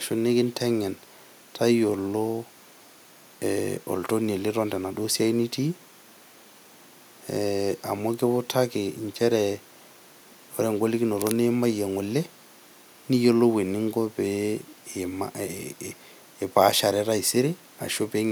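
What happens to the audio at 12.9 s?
Nothing goes wrong at 12.9 s; the speech carries on intact through that moment, with no dropout, click, distortion or other fault.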